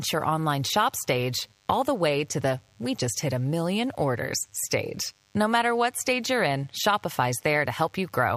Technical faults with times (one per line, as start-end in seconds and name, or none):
0.00-8.36 DECT cordless phone buzz